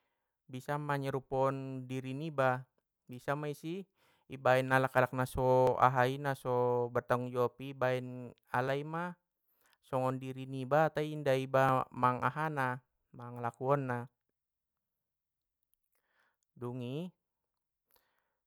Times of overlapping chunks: 2.67, 5.67, 8.68, 11.69, 14.69

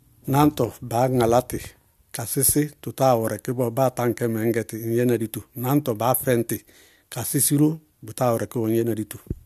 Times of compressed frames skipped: none

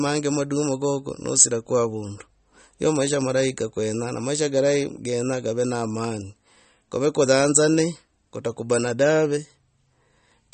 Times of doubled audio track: none

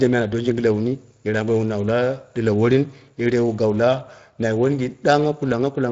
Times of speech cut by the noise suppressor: none

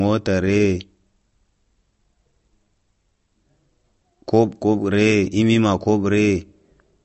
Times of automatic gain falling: none

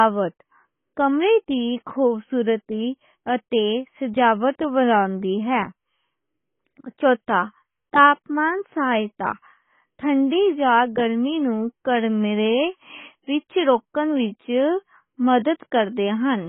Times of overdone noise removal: none

